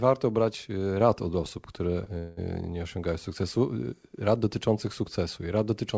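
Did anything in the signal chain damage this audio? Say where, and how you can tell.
Yes. At about 2.04 to 2.08 s there is a short stall from a late packet, at the network and jitter-buffer stage. One packet arrived after its playout time, so the buffer briefly ran dry and the receiver stretched the last bit of sound by about 21 ms to cover the wait. Nothing is lost. That instant is just held a fraction too long, with a faint buzz or dip, and everything after it plays about 21 ms later.

From about 2.18 to 2.39 s there is a call audio freeze. The sound stops progressing and the last fragment is drawn out for about 190 ms as a fading buzz or hiss that never quite drops to silence, before the audio resumes exactly where it left off. No material is missing. The pause is inserted, pushing the rest of the clip 190 ms later. The likely cause is a burst of packets held up in transit, emptying the jitter buffer. 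The band-limited sound, with nothing above 8 kHz, fits the G.722 call codec on this path.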